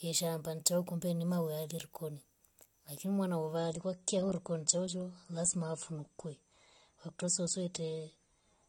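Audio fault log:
3.56–8.69 s, adaptive stream at a lower bitrate: the player switched to a lower-quality stream, consistent with AAC dropping from 96 to 32 kbit/s. Nothing above 9.8 kHz remains, so the speech abruptly dulls, codec artefacts rise, and no gap marks the change.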